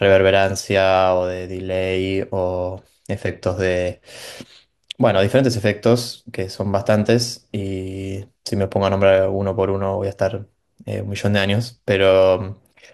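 A congested Bluetooth link caused an SBC bit pool drop from 2.76 to 4.19 s. The reduced coding budget, which fits a fall from bit pool 31 to about 15, starved the top sub-bands and coarsened the rest, so the speech loses treble and turns gritty until the rate recovers.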